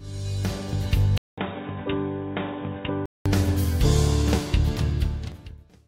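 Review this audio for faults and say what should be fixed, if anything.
From 1.18 s to 3.26 s the audio turns dull and boxy, with nothing above 3.8 kHz, a drop in level of roughly 10 dB, and a new background noise sitting around 30 dB below the signal. A gap of about 200 ms opens at the change. The likely cause is an input switched to a poorer device partway through, a narrower-band microphone or headset call profile with its own tone and noise floor. To prevent it, lock the recording input to the intended device and disable automatic device or profile switching during capture.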